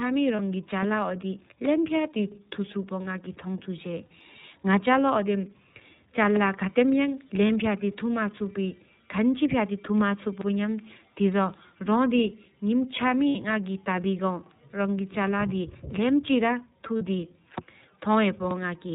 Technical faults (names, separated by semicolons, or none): iLBC codec; lost iLBC frames